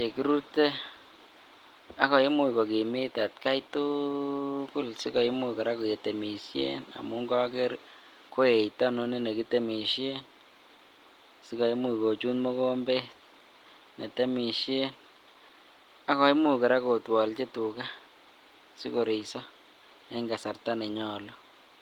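No technical faults can be heard in this speech.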